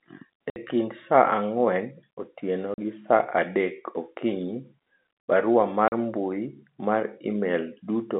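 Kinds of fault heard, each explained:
Packet loss filled with silence: dead silence replaces the speech for 60 ms at 0.5 s, and for 40 ms at 2.74 s and at 5.88 s, lengths that fit whole 20 ms packets. Hard edges and no repeated or stretched sound set this apart from concealed loss.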